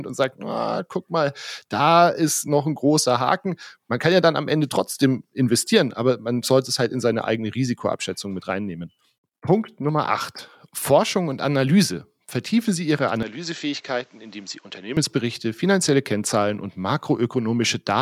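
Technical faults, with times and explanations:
13.23 to 14.97 s, input switched to a poorer device: the speech abruptly loses everything above 7.9 kHz and drops about 10 dB in level, with a faint new background noise sitting well below the speech, then returns to its full sound at 14.97 s. There is no gap at either transition. The likely cause is the recording input jumping to a different, narrower-band microphone or headset path, whose own bandwidth, gain and noise briefly replace the original's.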